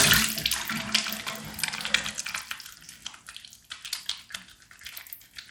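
Throughout the recording, the audio was likely squeezed through Bluetooth SBC compression at a starved bit pool, which fits a bitrate near 96 kbps. The upper sub-bands get few bits, so the treble flickers and drops away, while coarse quantisation leaves a plainly audible gritty haze and aliasing on the sound.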